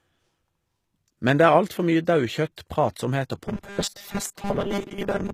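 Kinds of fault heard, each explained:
HE-AAC compression: Across the whole speech clip the treble has a synthetic quality that plainly comes from coding, and it is likely HE-AAC at a low rate of around 20 kbps. Only the lower spectrum is coded directly. The upper band is regenerated by spectral band replication, copying lower content upward under a coarse envelope. As a result the high frequencies do not match the original harmonics, and sibilants and other bright detail come out gritty, metallic or lispy.
Pre-echo: At 2.57 s a brief burst of hiss, about 13 ms long, sits just ahead of a sharp onset. A transform codec distributes its quantisation noise over an entire block. When a transient lands late in that block, noise scaled to the loud attack also spills into the quiet portion before it. The attack itself loses definition and sounds softened or smeared rather than crisp.
Robotic sound from repeated short buffers: From 3.48 s to the end of the clip the speech becomes a rigid, metallic buzz that only loosely tracks the original. 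This is likely caused by audio arriving too infrequently, so playback keeps reusing the last short segment while fresh material is dropped. Roughly two thirds or more of this stretch is repeated content. The repeats impose a fixed 200 Hz buzz, which fits a buffer about 5 ms long.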